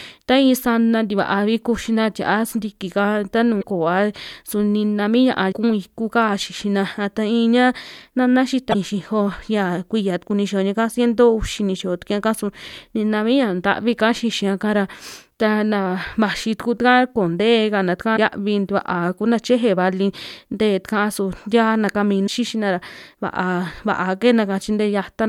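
Damaged data in the compressed stream of this speech recording corrupts a few short stretches, so the decoder misreads those frames and has to hunt for the next valid header before it can resume. Each time this produces a brief chirp, squawk, click or short hole lasting about 50 ms, at 3.59–3.64 s, 5.49–5.53 s, 8.70–8.75 s, 18.13–18.18 s and 22.24–22.29 s.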